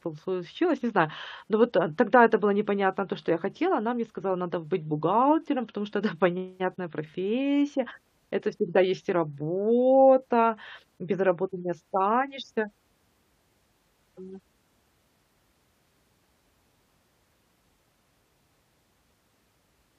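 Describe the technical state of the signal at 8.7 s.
The signal at 8.7 s is intact, with no audible fault at that moment.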